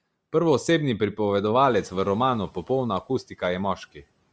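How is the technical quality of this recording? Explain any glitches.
The recording has two audible faults: a grainy coding artefact across the whole clip, and a short lapse in noise reduction early on.

Bluetooth LC3 compression runs throughout. The speech has a breathy, grainy edge, and the top of the band sounds hollow and hissy. The most likely cause is an LC3 encode at a low rate, consistent with about 32 kbps in 10 ms frames. At that rate the codec drops much of the upper spectrum and fills it with shaped noise. The band stops at 8 kHz, which comes from the call microphone processing.

The noise suppressor is catching up from 1.6 to 2.54 s. Room noise jumps by about 12 dB at roughly one and a half seconds. The suppressor's noise estimate is still tuned to the quieter level, so the new noise passes with little reduction. Over about 940 ms the estimate adapts and the noise sinks by about 7 dB. 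It settles about 27 dB below the speech. The result is an audible surge of background noise that then fades back.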